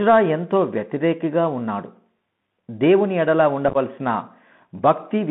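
A speech recording heard through a Bluetooth CVSD headset codec for its whole length. The audio sits in a narrow 150 Hz to 3.5 kHz telephone band, which fits a 64 kbps CVSD link. A granular hiss runs under it, and s sounds turn scratchy where loud, bright sounds outrun the codec's adaptive step. That hiss and edge set it apart from simple band-limiting. Between 3.69 and 3.77 s there is unconcealed Bluetooth headset packet loss. About 41 ms of sound drops out in several holes spread over 60 ms, the longest about 11 ms, which points to around ten lost packets. The holes have hard edges, giving a chopped crackle rather than the smoothed or repeated fill of concealed loss.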